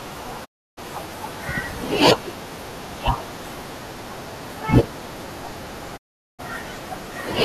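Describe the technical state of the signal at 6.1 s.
A digital broadcast dropout runs from 5.96 to 6.41 s: the receiver stopped getting decodable frames, so the speech fades out in about 20 ms and goes silent for roughly 0.4 s.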